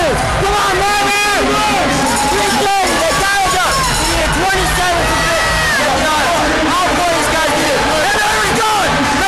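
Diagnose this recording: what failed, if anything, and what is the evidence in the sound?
Nothing in this recording points to a failure at any stage of the chain. No event in the audio calls for a fault in capture, conversion, transmission, storage or playback to explain it.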